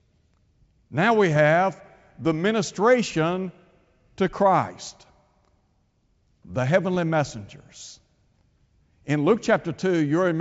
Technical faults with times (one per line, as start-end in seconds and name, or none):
1.31-1.37 bit errors on an ADPCM link
6.94-6.99 bit errors on an ADPCM link